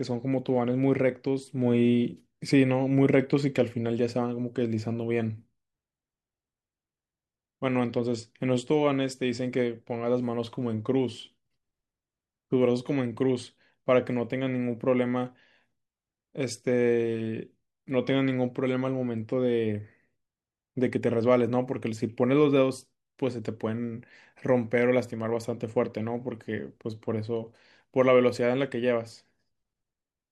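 Listening closely to the speech in the recording turned up nothing that stood out.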